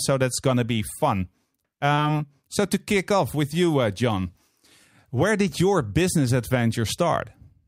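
At 1.93 to 2.07 s there is a short concealed packet loss: 40 ms of speech never arrived, so the receiver filled 41 ms by extending the preceding sound, then blended back, adding roughly 15 ms. It sounds like a brief smear. A spectrogram shows the prior spectrum held unnaturally steady.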